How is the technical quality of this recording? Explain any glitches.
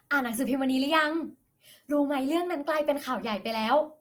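The quality is noticeably compromised across the whole recording. From start to finish the speech sounds grainy, rough and noisy, with plainly audible codec damage, likely from Opus compression in its music mode at a rate that fits around 24 kbps. Thin bands get filled with folded or noise content, so detail turns gritty while the bandwidth stays full, reaching about 20.1 kHz.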